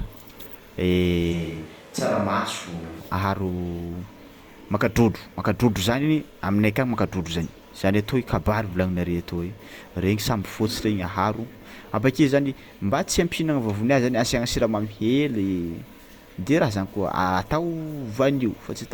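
From 1.35 to 2.99 s the signal from the close microphone most likely dropped out, and the recording fell back to a microphone further from the talker. This switch to a distant microphone makes the speech turn roomy and hollow at once, with thinner bass, though its level stays about the same. Background room noise becomes audible roughly 25 dB below the speech. Both the change over and the return are abrupt.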